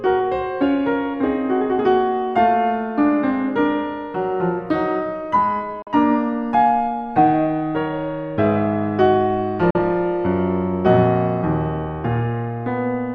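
At 5.82 to 5.88 s and again at 9.70 to 9.79 s the music snaps to silence in a digital broadcast dropout. The receiver muted over a 3 ms fade after losing roughly 43 ms of programme, which fits one dropped frame, then picks up later on.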